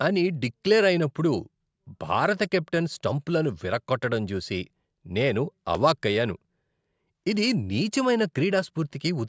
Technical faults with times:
none

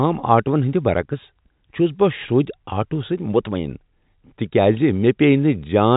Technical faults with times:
none

